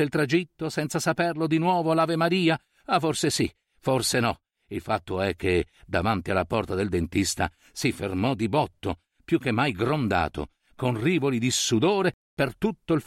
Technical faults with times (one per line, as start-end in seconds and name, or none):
none